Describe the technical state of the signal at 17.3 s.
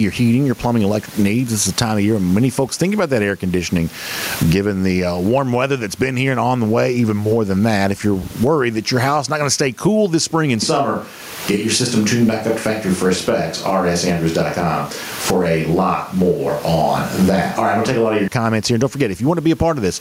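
At 17.3 s the sound comes from a switch to a distant microphone. It runs from 10.62 s, after "cool this spring and", to 18.28 s, before "comments here". The close pickup likely dropped out, leaving a far one. The voice turns roomy, hollow and thin in the bass. The level barely changes. Background noise rises to roughly 30 dB below the speech.

Gain pumping is also present, as it is throughout. The input gain is likely set far too high, and a fast limiter pulls it down on each loud sound. The gain swings by around 20 dB. The dynamics sound squashed.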